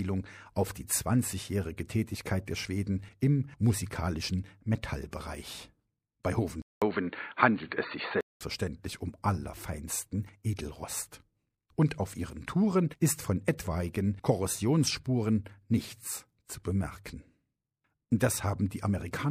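Input switched to a poorer device, 6.62 to 8.41 s: after a 200 ms silence, the sound turns dull and boxy, cut off above 4.5 kHz, with faint new background noise and little change in level. The input likely jumped to a narrower-band microphone or headset profile, then back.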